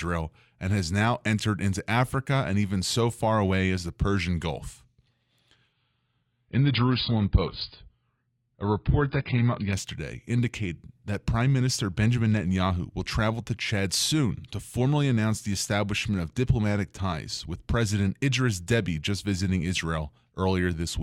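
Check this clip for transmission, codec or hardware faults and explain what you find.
One fault is present. From 5.73 to 9.73 s, the adaptive stream drops to a lower bitrate: nothing above 5.1 kHz, swirly artefacts, sudden switches without a gap, consistent with roughly 16 kbit/s AAC after a slowed connection. A spectrogram shows a flat ceiling.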